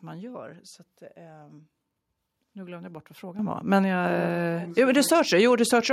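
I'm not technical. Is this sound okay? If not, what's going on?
No. Microphone volume stepped up at 3.39 s, just after "glömde jag bort vad": the call software judged the microphone too quiet and turned its input level up all at once, so the speech and the background noise suddenly get clearly louder together.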